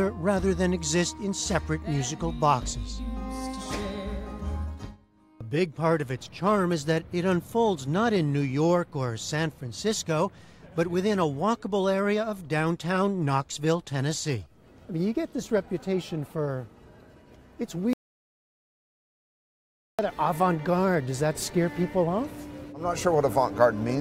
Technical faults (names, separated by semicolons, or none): audio dropout to silence